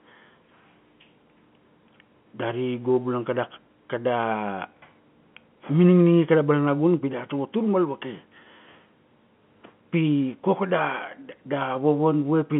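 Speech carried over G.711 telephone coding, with the line band running from about 150 Hz to 3.4 kHz and nothing above 3.8 kHz, and no technical fault present.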